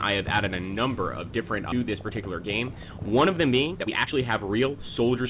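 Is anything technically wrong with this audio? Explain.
Yes, two faults are audible, both on a call path whose spectrum stops at 4 kHz, which fits G.711 mu-law at 64 kbps.

Skip ahead, 1.72 to 1.74 s: about a second of audio was discarded while later audio was already queued, so playback leaps forward with no gap. It sounds like an abrupt cut. On a waveform, two unrelated segments butt together. On a spectrogram, there is a sharp vertical seam.

Jitter buffer speed-up, 1.82 to 5.22 s: the buffer held excess delay and trimmed it by repeatedly removing pitch-period-sized slices, roughly half a second in total. Everything plays at 116% speed with unchanged pitch and sounds hurried. The spectrogram shows compressed timing but harmonics at the same frequencies.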